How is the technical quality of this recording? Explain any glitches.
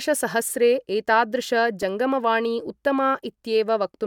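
The recording has one glitch. At 1.82 s there is a repeated buffer. New audio arrived late, so the device replayed its last piece twice more. That piece is about 2.7 ms long, which fits a 128-sample buffer. The hard joins make a brief click or buzz, and a few milliseconds of speech are lost.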